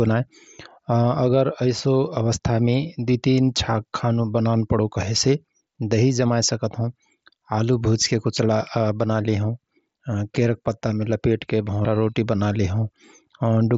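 A speech recording with one brief glitch at 11.83 s, just after "पत्तामे लपेटके": a short, buzzy hold of about 15 ms before the signal picks up again. This is concealed Bluetooth headset packet loss. Voice packets from the headset went missing, which fits two lost frames, and the phone filled the gap by repeating the best-matching recent stretch of waveform. On loud sounds, the mSBC headset codec adds a light graininess.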